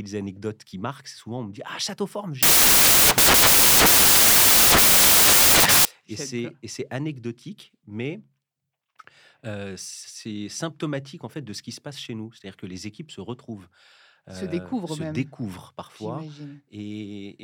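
From 2.43 to 5.85 s the speech collapses into loud, harsh broadband noise. These are samples built from the wrong bytes. Noisy low bits dominate each value.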